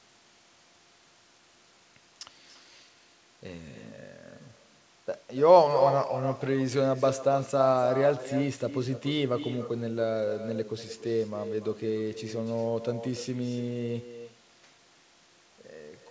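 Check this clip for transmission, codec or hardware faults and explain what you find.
One fault runs through the whole clip: echo with no canceller. Every phrase is shadowed by a thinner copy about 9 dB quieter, arriving roughly a third of a second later. The far end's loudspeaker feeds its microphone, and nothing removes that return path. The band stops at 8 kHz, which fits G.722 at 64 kbps on the call path.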